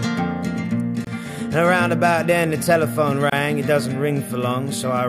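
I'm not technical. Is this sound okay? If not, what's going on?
No. At 1.05 s and 3.30 s the sound briefly drops out for about 25 ms, then resumes where it left off. Each is a gap at a join of encoded pieces, where separately compressed pieces kept their added silence when joined.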